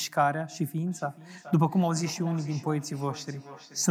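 Feedback echo between two devices runs from 0.87 s to the end of this speech clip. The sound returns at a steady interval of roughly 0.4 s, with the echo peaking at about 18 dB below the direct speech. A second device in the same room is replaying this microphone's signal, and the microphone captures that playback again. The echo canceller only subtracts audio its own device plays, so the returned copy passes through.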